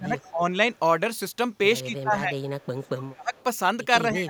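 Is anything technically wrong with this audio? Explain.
Yes. Speech suppressed in double talk occurs at 0.00–0.43 s, 1.84–2.37 s, 2.62–3.34 s and 4.02 s to the end. The speech dips by up to about 25 dB, likely because the echo canceller mistook overlapping talk for echo. Echo leak occurs at 0.18–0.30 s, 2.39–2.67 s and 3.35–3.43 s: a faint speech copy delayed 165 ms, about 30–35 dB down, that the canceller likely failed to remove.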